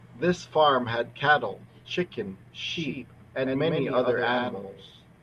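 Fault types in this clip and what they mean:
Doubled audio track: the speech is most likely being captured a second time by a slower path, or an edit holds two copies out of step, so a second full-band copy is mixed in about a tenth of a second behind the first and roughly 5 dB quieter. From 2.66 s to the end the speech has a hard, slapback-like double with no decay or room colour, and that second copy cuts in abruptly rather than building up.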